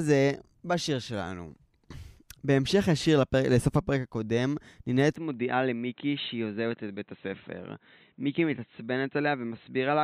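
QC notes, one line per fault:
5.16–10.04 s, input switched to a poorer device: with no gap, the speech turns dull and boxy, with nothing above 4.1 kHz, a few decibels quieter, over a faint new noise floor. This likely comes from recording moving to a narrower-band microphone or headset.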